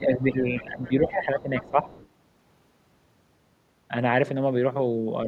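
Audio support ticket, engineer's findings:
Speech suppressed in double talk, 0.00–1.88 s: level dips by about 10 dB, roughly 1.5 s affected in total. Likely cause: echo canceller treating overlapping far-end and near-end as echo, attenuating both. Waveform shows sagging envelope.

Other side's voice leaking through, 0.83–0.88 s: brief scrap about 30 dB below the talker. Likely cause: residual loudspeaker echo missed by the canceller. Spectrogram shows a faint, short harmonic smear overlapping the speech.

Other side's voice leaking through, 1.66–2.07 s: longer faint second voice, about 30 dB under the talker. Likely cause: incomplete echo cancellation at the tail of the double-talk period. Spectrogram shows low-energy harmonic traces beside the main speech.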